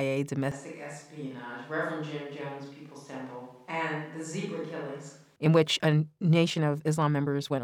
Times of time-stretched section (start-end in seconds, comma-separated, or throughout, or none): 5.52-7.63